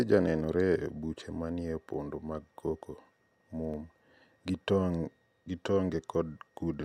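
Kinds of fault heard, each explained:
Clock drift buffer slips: a steady click every 0.6 s, likely two clocks drifting a few hundred ppm apart so a handful of samples slip.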